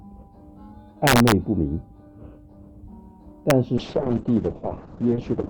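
From 1.07 to 1.32 s the loudest peaks break into harsh, violent cracks, the mark of integer overflow. Loud moments drove the signal about 2 dB past the largest value the integer format can hold, and instead of being limited the samples wrapped around to the opposite sign, jumping across the full range. A second, single crack at 3.50 s comes from a peak only about 1 dB over. Both are far sharper than ordinary clipping.

From 3.79 s to the end there is a call bitrate drop. The sound turns rough and coarse, and the top end is cut away, with audible content stopping at 8 kHz where it previously extended to 20 kHz. The degradation points to the encoder being told to spend far fewer bits, which fits a fall from around 128 kbps to roughly 6 kbps. It stays at this lowest level for about 1.7 s, with no recovery before the audio ends.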